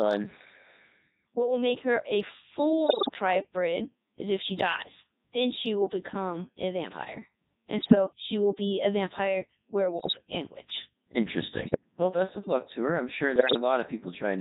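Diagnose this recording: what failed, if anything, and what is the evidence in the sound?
Codec stage: the speech throughout has the robotic, buzzy quality of the Codec 2 vocoder, which fits its 3.2 kbit/s mode. A spectrogram shows neat harmonic stacks under a smoothed envelope with little noise between them, because the decoder rebuilds voiced sound from sine waves instead of keeping the waveform.

Radio link stage: bit errors on digital voice radio corrupt the vocoder's parameters at 2.86–3.15, 7.82–7.95, 10.00–10.18, 11.62–11.81 and 13.36–13.59 s, at error rates of a few percent. These produce bleeps, warbles and pitch jumps. On a spectrogram the harmonic spacing and envelope change abruptly from one frame to the next, and the waveform shows sudden jumps in level.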